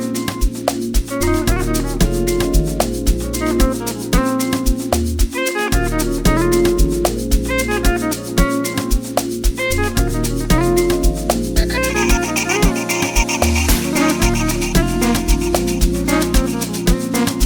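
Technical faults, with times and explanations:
No technical faults can be heard anywhere in this clip. There is nothing to time or explain.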